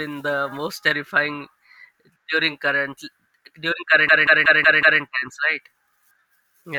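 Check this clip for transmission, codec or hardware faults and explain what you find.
There's one clear fault in this speech: a system hang loop from 4.09 to 5.02 s. The system stalled while the audio hardware kept replaying its ring buffer, so one 186 ms chunk, which fits an 8192-sample buffer, repeats five times at about 5.4 Hz, giving a machine-gun stutter.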